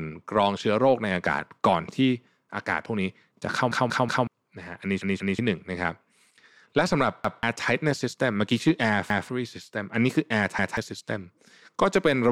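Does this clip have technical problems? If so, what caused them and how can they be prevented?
Yes: repeated buffer faults at 3.72–4.27 s, 5.02–5.39 s, 7.25 s, 9.10 s and 10.59 s. When fresh audio arrived late, the device replayed its last 186 ms chunk, which fits an 8192-sample buffer. The first stretch repeats three times and the second twice, together losing close to a second of speech. Each stutter is an identical copy joined with a hard edge, not the silence of a dropout. Larger buffers or a higher-priority audio thread would prevent this.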